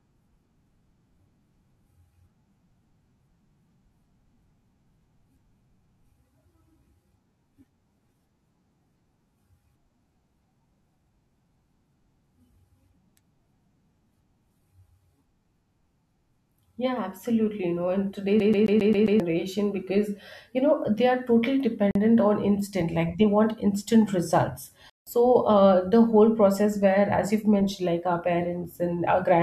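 At 18.40 s the speech falls into a CD stuck on one turn, lasting until 19.20 s. The same 0.13 s of audio plays six times in a row, with a brief mute at each restart. That is the behaviour of a laser thrown back one track by damage at the same spot on each revolution. The result is a rapid, perfectly regular stutter, since every repeat has identical length and content.

Two blocks of digital silence follow. The first, at 21.91 s, lasts about 43 ms. The second, at 24.90 s, runs to 25.07 s, about 171 ms. In each, the signal drops straight to silence and returns with no fade. The shorter gap is heard as a brief dropout. The longer one is a distinct hole in the sound. Their lengths fit a 2048-sample and an 8192-sample buffer left unfilled in time.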